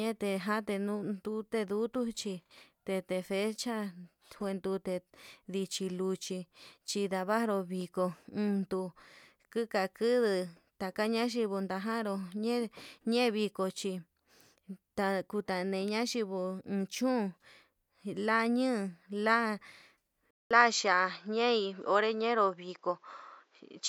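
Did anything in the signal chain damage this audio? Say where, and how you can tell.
Yes. At 20.31 s the speech drops out for about 200 ms, then returns sounding duller and narrower until the end at 23.89 s. Nothing reaches above 7.6 kHz after that point. A faint new background noise appears, roughly 45 dB below the speech. The loudness hardly changes. This points to the input stage, most likely the input switched to a poorer device. The new device has a narrower band and its own noise.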